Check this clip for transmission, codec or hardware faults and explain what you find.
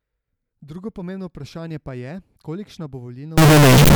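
One fault is present, at the very end of the speech. From 3.38 s to 3.95 s, signed and unsigned samples are mixed up. The top bit of each 16-bit sample is likely being read wrongly. Every zero crossing then jumps across the full range. The result is loud, harsh distortion. Quiet moments blare as loudly as the rest.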